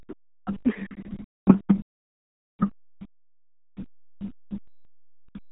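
This is speech. It carries the sound of the RealAudio 14.4 codec throughout. Nothing above 3.8 kHz survives, and the band sits between 300 Hz and 3.6 kHz. Heavy coding damage leaves the speech muffled and gargly, which fits an 8 kbit/s dial-up codec.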